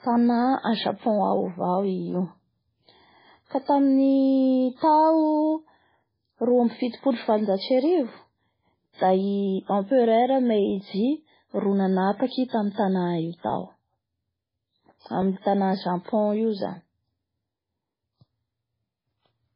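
The whole speech clip carries heavy MP3 compression damage, likely from encoding at a very low bitrate, in line with about 16 kbps. With so few bits, the encoder drops weaker spectral lines, which flicker on and off between frames and give the sound a watery, swirling quality, while s sounds turn metallic and chirpy. Nothing is present above 5.3 kHz, so the top end sounds dull and band-limited from start to finish.

Pre-echo appears first at 0.97 s, where a short hiss runs for 51 ms ahead of an attack. The codec spreads quantisation noise across a whole transform block, so when a sharp onset lands late in a block, noise scaled to the loud part leaks into the quiet moment before it. The same smeared, softened attack returns at 6.68 s (30 ms), 12.27 s (42 ms) and 12.72 s (59 ms).

A repeated buffer occurs at 10.7 s, 13.5 s and 15.22 s. Each time, a 10 ms piece of audio plays once more with a hard join, which fits a 10 ms playback buffer that the device replayed because fresh audio arrived late. 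With a piece this short, each repeat is heard as a click or brief buzz. No audio is lost, since the repeat only delays what follows.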